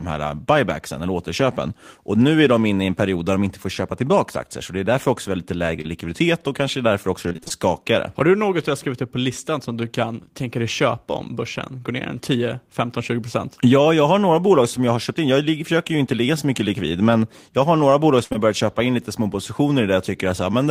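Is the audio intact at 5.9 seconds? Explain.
No. A short concealed packet loss runs from 5.81 to 5.89 s, between "är därför också lite" and "och kanske därför också". About 20 ms of audio never arrived, and the decoder extended the preceding sound to patch it. The result is a brief smear rather than a silent dropout.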